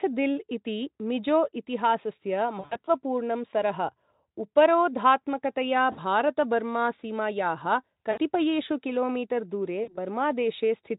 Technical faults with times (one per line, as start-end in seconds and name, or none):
2.59-2.90 VoIP packet loss concealed by the speech codec
5.91-5.99 VoIP packet loss concealed by the speech codec
8.11-8.18 VoIP packet loss concealed by the speech codec
9.83-9.98 VoIP packet loss concealed by the speech codec